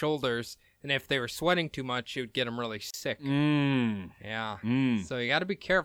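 At 2.91 to 2.94 s, right after "would get them really", there is a gap at a join of encoded pieces. The speech breaks off for about 34 ms, then resumes exactly where it left off. The edges are smeared by the codec. The cause is two separately encoded pieces joined without trimming. The encoder's start-up delay and the padding of the final frame were both left in, leaving a short hole of silence.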